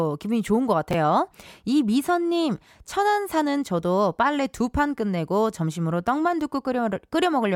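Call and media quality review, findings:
Brief jumbled blip in the speech, 0.91–0.94 s. Chunks out of order: one 10 ms chunk played after its successors, consistent with a jitter buffer or playout write landing about two chunks late. Nothing missing, three hard joins.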